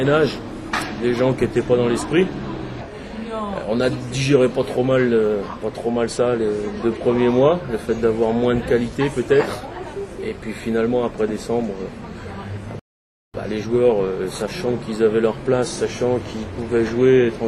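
At 12.79 s the audio drops to silence until 13.34 s, a rebuffering stall: playback exhausted its downloaded data and halted while more arrived. It resumes exactly where it stopped, so nothing is lost, but about 0.55 s of dead air is inserted.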